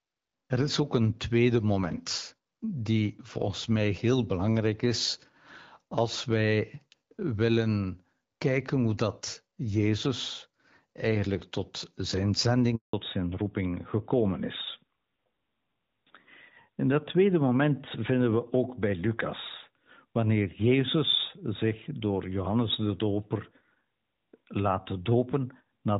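It's a speech recording, and at 12.75 s there's a handover gap: the sound drops out for about 180 ms, until 12.93 s, as the call switches networks and no frames arrive, so whatever was said there is simply gone. Right after that comes a fallback to narrowband. Before the switch, the HD Voice stretch has that light AMR-WB coding quality. From 12.93 s to the end, nothing above 4 kHz is left, so the voice sounds duller and rougher, which fits a drop to AMR-NB at around 12.2 kbit/s.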